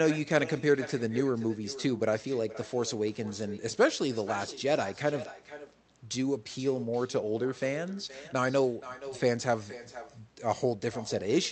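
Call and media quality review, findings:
Echo with no canceller, whole clip: every phrase followed about half a second later by a quieter, thinner copy, about 15 dB down. Far-end loudspeaker into open microphone, unremoved. Delayed discrete repeat, not room reverb smear.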